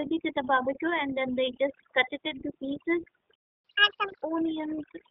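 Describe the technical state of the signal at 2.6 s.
At 2.6 s two faults act together, both running through the whole clip. A noise reduction stage was set too hard, an overdone noise removal that cuts individual frequency bands whenever they sit near its noise estimate, taking the softer parts of the speech with them. The background drops away, flecked with twinkling specks.

The speech also passes through the iLBC codec, a narrowband VoIP coder that handles each 30 ms frame independently, at a rate that fits its 13.33 kbps mode. The line passes roughly 250 Hz to 3.5 kHz with nothing above 3.5 kHz, so the voice sounds muffled and plainly rough and synthetic.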